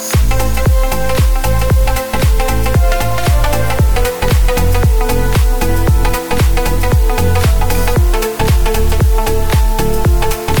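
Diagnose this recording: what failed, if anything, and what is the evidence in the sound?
Sample-format conversion cut to 5 bits; this low bit depth with dither turns rounding error into an even hiss roughly 20 dB down throughout.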